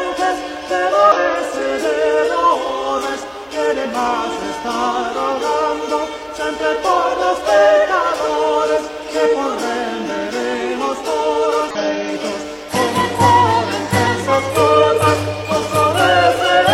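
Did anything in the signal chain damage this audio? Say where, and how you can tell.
Yes: damaged data in the compressed stream. Brief 50–60 ms blips at 1.12, 3.81, 6.92, 11.71 and 14.03 s show the decoder losing frame sync, then resyncing.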